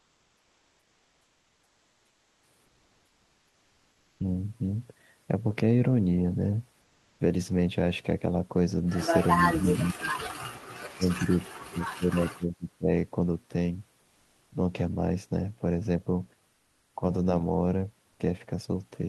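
A speech recording in which the sender has likely switched to discontinuous transmission during pauses, of the kind Opus DTX performs, so the receiver substitutes synthetic comfort noise in place of the background. The real room noise, which sits about 41 dB below the speech, gives way to a flat, featureless hiss at 0.00–2.43 s, 2.65–4.19 s, 6.81–7.19 s, 16.53–16.93 s and 18.11–18.19 s. In most of these gaps the hiss is about 1 to 3 dB quieter than the genuine background, and the 80 ms gap shows no level change. Between 9.44 and 12.89 s, speech is suppressed in double talk. An echo canceller that likely could not tell the talker apart from the far end's loudspeaker echo turned the near signal down. The voice sinks by very roughly 30 to 40 dB in three stretches, 9.44–10.27 s, 10.85–11.39 s and 11.69–12.89 s.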